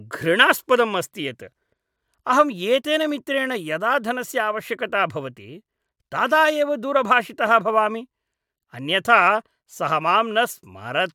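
No technical faults are audible.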